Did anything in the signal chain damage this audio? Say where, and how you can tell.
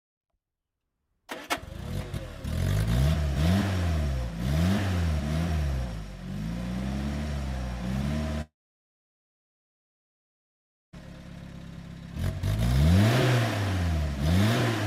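Yes. At 8.41 s the sound smears into a fading buzz, then about 2.4 s of silence follows until it resumes at 10.96 s, with roughly 2.5 s never heard. This is likely a long network dropout: packets stopped arriving, and the receiver's concealment faded out.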